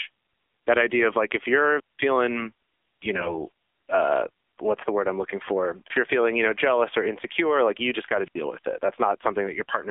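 Throughout, the speech sounds narrow, buzzy and synthetic, confined to roughly 300 Hz to 3.5 kHz, the sound of AMR narrowband mobile codec compression at a low rate, which fits the 7.4 kbps mode. From 1.76 to 2.00 s, and again from 8.25 to 8.36 s, hiss briefly rises and then the audio drops into near silence, for about 191 ms and then about 76 ms, before returning. This is a wireless microphone squelch dropout: the radio signal fades and the receiver mutes its output. Between 3.14 and 3.41 s the speech keeps its pitch and level but turns hoarse, scratchy and gargly. These are AMR bit errors, with a few percent of bits flipped across what sounds like about ten frames, so the decoder rebuilds the voice from wrong pulse and spectrum values.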